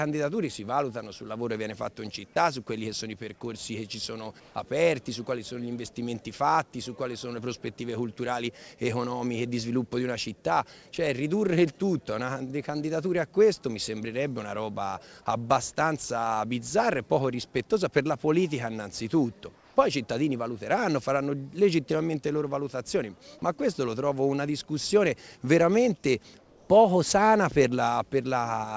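Three short stretches of the quiet background turn into a smooth, detail-free hiss, slightly quieter than its surroundings: 4.40–4.55 s (about 2 dB down), 19.55–19.76 s (about 4 dB) and 26.39–26.69 s (about 3 dB). It is likely comfort noise in place of the background, synthesized by the receiver while discontinuous transmission paused the sender. The audio also reaches nothing above 8 kHz, which fits a wideband call codec such as G.722.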